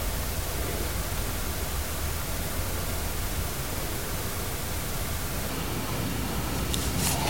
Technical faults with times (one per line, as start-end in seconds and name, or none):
5.50-7.29 section at the wrong speed